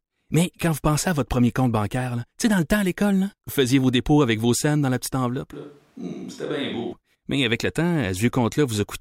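From 5.53 to 6.93 s, the speech abruptly turns roomy and thin, a few decibels quieter, with more background noise. This is likely a switch to a distant microphone.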